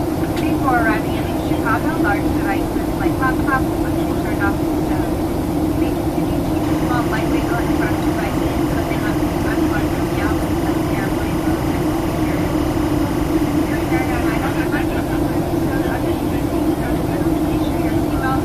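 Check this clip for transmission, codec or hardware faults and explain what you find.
One fault is present. Timecode bleed runs from 6.63 to 14.63 s. Linear timecode from an adjacent track or cable couples into the audio path. Its square wave flips between pitches near 1 and 2 kHz at a rate that fits 25-frame code, giving a steady chirping warble roughly 15 dB beneath the sound.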